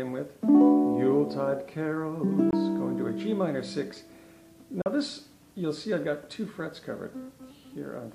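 At 2.51 s the audio cuts out for about 20 ms, and at 4.82 s it cuts out again for about 40 ms. Both gaps are silent holes, and the sound returns further along, as though it had kept playing underneath. This pattern points to a Bluetooth dropout as the likely cause: packets failed to reach the headphones in time and were discarded. The two lengths fit the loss of one packet and then two.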